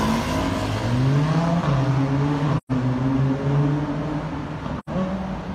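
The audio drops out twice into soft-edged silence, from 2.57 to 2.72 s and from 4.79 to 4.89 s, fading out and back in. This is AAC frame loss with muting. About 128 ms and 85 ms went missing, fitting three and two lost frames whose spectra the decoder zeroed, with overlapping windows smoothing the edges.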